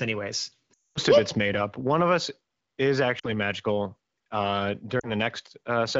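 At 0.73 to 0.98 s, just before "of it's made up", lost AMR speech frames leave the decoder repeating stale settings with falling gain, so the sound drops to near silence within two frames. Shorter dips follow at 3.19 s, after "one of us is", and 4.99 s, after "magical uh". On a spectrogram they appear as frozen, blurred harmonics thinning to a gap; on a waveform, as decaying envelopes.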